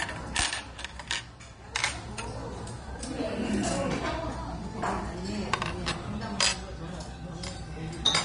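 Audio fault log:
Throughout, Vorbis compression: nothing is present above about 10.6 kHz, and the treble below that edge is plainly damaged, with a hissy, grainy texture, roughened tones and softened attacks. This is likely low-quality Vorbis encoding. The encoder keeps a smooth outline of the spectrum but quantises the fine high-frequency detail so coarsely that it turns into noise of similar energy. The damage points to a low bitrate, around 34 kbps.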